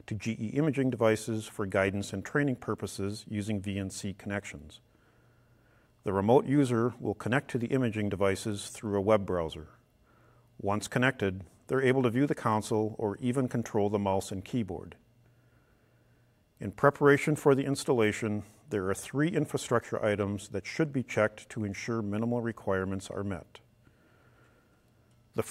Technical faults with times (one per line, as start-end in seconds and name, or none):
none